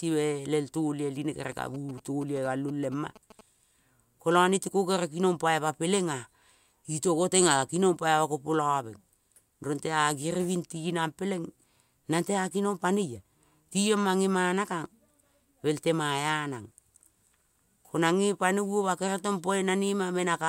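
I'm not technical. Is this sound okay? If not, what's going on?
No. From 1.52 to 3.41 s, right after "melel talioi line kere", there are GSM signalling bursts: a nearby 2G mobile phone talking to its network, picked up by the audio wiring. They sound like a galloping dit-dit-dit of short buzzes, quieter than the speech. Unlike steady mains hum, they come in stuttering groups, then stop.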